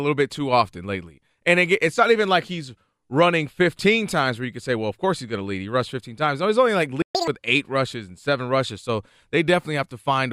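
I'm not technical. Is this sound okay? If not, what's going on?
No. At 7.02 s the speech cuts out for about 0.13 s, until 7.15 s. That is a playback stall, likely from the player running short of data.

Right after it, until 7.28 s, comes catch-up at higher speed. The speech plays at double speed and sounds much higher to recover the lost time.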